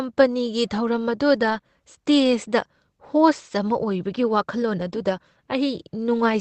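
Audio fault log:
1.41–1.59 s, lost packet rebuilt from error correction: about 100 ms of audio, from 5 separately lost packets, was played from the low-bitrate redundant copies carried in the following packets. There is no gap, but the sound turns briefly rougher and noisier through the Opus call path, whose audio stops at 8 kHz.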